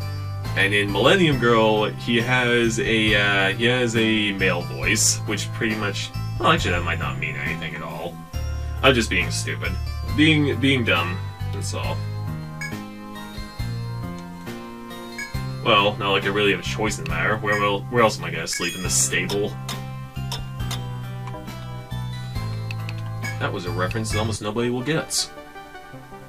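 Nothing in this one trips any alarms, with no faults turning up anywhere along the way.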